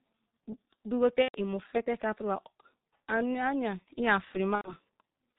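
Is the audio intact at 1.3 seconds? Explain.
No. Between 1.22 and 1.37 s, VoIP packet loss was concealed by the speech codec. The decoder stretched its last pitch and filter into a fading buzzy tone or coloured noise, which fits about 120 ms of lost 30 ms frames. Throughout, the G.723.1 codec leaves the speech muffled and hoarse, with blurred consonants and nothing above 4 kHz, consistent with roughly 6.3 kbit/s.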